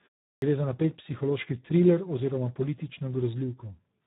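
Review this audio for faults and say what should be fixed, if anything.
Speex codec damage runs through the whole clip, and it is heavy. The speech sounds hoarse and noisy. This CELP coder has too few bits left for the excitation, so the natural texture of the voice is replaced by a coarse approximation. Nothing is present above about 3.8 kHz, which points to narrowband coding. The overall sound fits a low setting of around 8 kbps. To prevent this, use a higher Speex quality setting or switch to a modern wideband codec such as Opus.

A clipped start after a pause occurs at 0.37 s, right after 0.37 s of silence. The first 51 ms of sound is missing, so the speech begins abruptly without its opening sounds. The output device went idle during the silence and had not woken or relocked in time. The loss happens only when sound resumes. To prevent this, keep the output stream active through silences or add a short lead-in before playback starts.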